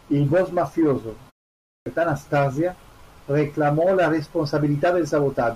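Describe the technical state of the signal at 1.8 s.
At 1.8 s the speech has a clipped start after a pause: from 1.59 to 1.86 s, the output wakes late after a 0.36 s gap, swallowing about 270 ms of onset, unlike muted pauses, which lose only background.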